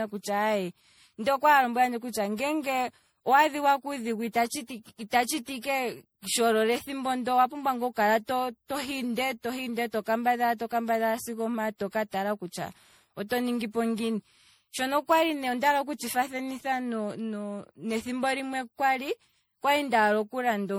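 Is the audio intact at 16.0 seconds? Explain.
No. At 16.0 s the speech shows generation loss, as throughout: swirly, hollow, smeared, with blurred attacks. It likely comes from repeated re-encoding, around seven passes, fitting 64 kbit/s MP3.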